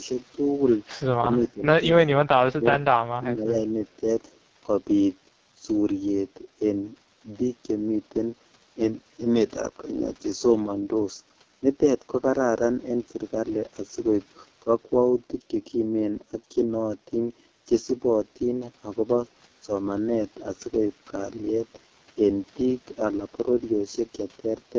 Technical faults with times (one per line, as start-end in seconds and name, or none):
0.00-24.79 AMR wideband (HD Voice) codec
1.20-1.65 speech suppressed in double talk
2.03-2.73 speech suppressed in double talk
3.00-3.50 speech suppressed in double talk